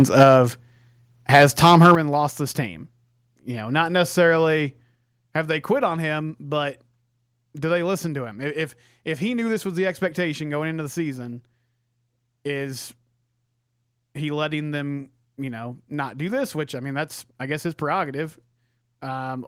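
From 0 to 0.36 s the speech has a crackling, flattened edge on its loudest parts, and at 0.23 s the level drops suddenly by about 4 dB. The crackle is likely microphone overload: the input ran about 8 dB past the converter's limit, squaring off the tops of a few percent of samples. The drop is likely the microphone volume stepped down, with the call software cutting the input gain in one step after detecting that overload.

The same crackling returns from 1.33 to 1.95 s, this time with the input about 9 dB over the limit. At 1.95 s, just before "lost this team", the voice and the background together fall by about 9 dB in a single step.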